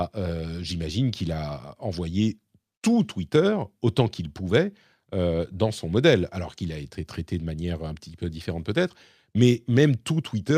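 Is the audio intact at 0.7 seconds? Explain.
Yes, the speech at 0.7 seconds is intact, with no dropout, click, distortion or other fault at that moment.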